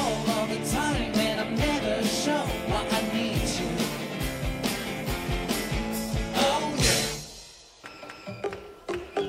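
No technical faults are audible anywhere in the clip.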